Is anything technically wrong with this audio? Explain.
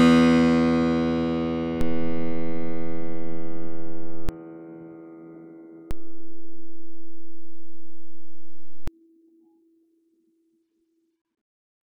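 Yes. The music contains two DC steps, where the waveform's zero line suddenly shifts and later returns, much as when an input carrying an offset is switched in and out. The first runs from 1.81 to 4.29 s with an offset of about -15 dBFS; the second from 5.91 to 8.88 s at about -18 dBFS. Each jump on and off is heard as a low thump or click, while the music itself carries on unchanged.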